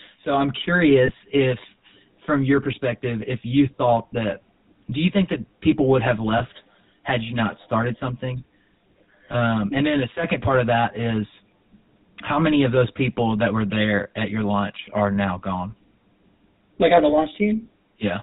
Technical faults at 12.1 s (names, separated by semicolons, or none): channel delay (comb filtering); GSM full-rate codec